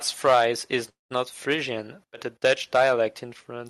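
At 0.89 s the speech halts. A fading buzz, then near-silence, fills to 1.12 s. A call audio freeze is likely. Speech resumes intact.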